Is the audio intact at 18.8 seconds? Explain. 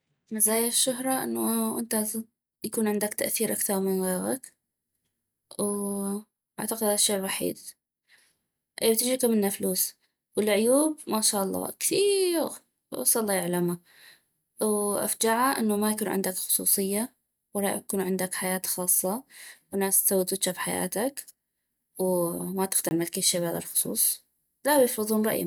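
Yes, the speech plays through cleanly at 18.8 seconds, with no dropout, click, distortion or other fault to be heard at that point.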